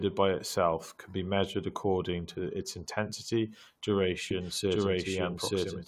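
From 4.31 s to the end, a doubled audio track appears: a second full-band copy of the speech runs roughly a second behind at about the same level, starting abruptly and without room colour, likely from a slower capture path or misaligned edit.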